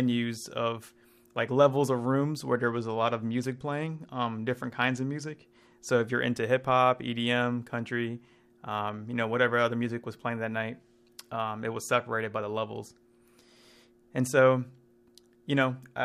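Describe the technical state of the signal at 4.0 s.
At 4.0 s the speech sits inside a Bluetooth SBC bit pool drop from 2.57 to 5.32 s. Starved upper sub-bands dull the treble and coarse quantisation adds grit, consistent with roughly 105 kbps.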